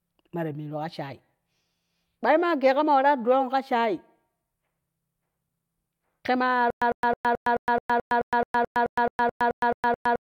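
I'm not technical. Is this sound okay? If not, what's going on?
No. From about 6.70 s to the end, the playback most likely stalled and kept retrying, replaying its last scrap of speech each time before running dry. You hear a stutter with silent gaps: a clipped burst about 103 ms long, then about 113 ms of dead silence, repeating 16 times at a steady rhythm of roughly one every 0.22 s. The speech that should have continued during that stretch never comes through.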